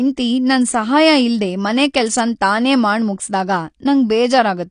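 Speech, and the whole thing has plainly audible codec damage, most likely AAC compression. There's nothing above about 9.8 kHz, so the top end sounds dull and closed in, and the coder has smeared what's left: sibilants get a fizzy, watery edge and held sounds warble. That lowered cut-off and patchy spectrum fit AAC-LC squeezed down to something like 32 kbps, starving the high bands of bits and dropping them.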